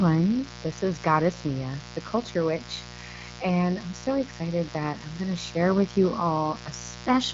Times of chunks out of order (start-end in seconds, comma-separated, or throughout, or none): none